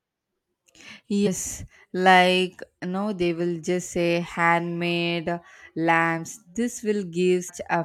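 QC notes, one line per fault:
1.26–1.28 s and 7.48–7.50 s, damaged data in a compressed stream: corrupted bytes in the compressed speech make the decoder misread those frames and lose sync while it hunts for the next valid frame header, so each spot comes out as a brief chirp, squawk, click or short hole, about 20 ms long.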